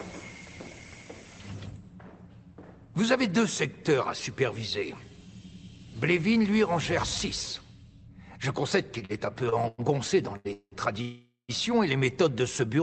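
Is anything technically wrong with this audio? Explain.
Yes. Repeated stalls (stutter), 8.99 to 10.74 s: late packets repeatedly drained the jitter buffer, so seven held, stretched gaps, the longest 188 ms, make the sound drag and stutter.

Call audio freeze, 11.02 to 11.51 s: the sound hangs as a fading continuation, then falls silent for about 130 ms before resuming, likely from delayed packets emptying the jitter buffer.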